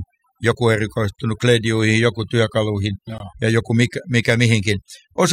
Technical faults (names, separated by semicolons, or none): overdone noise removal; gap between chunks